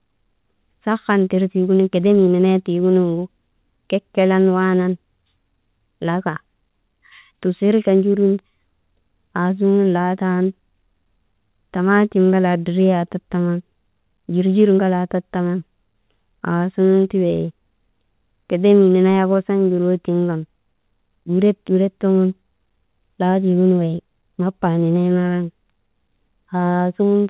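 Speech with no technical faults to report. It has come through a call path, and the band stops at 4 kHz with nothing above, which fits narrowband G.711 mu-law coding at 64 kbps.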